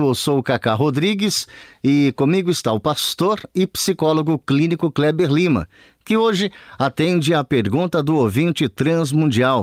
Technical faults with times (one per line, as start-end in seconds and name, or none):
none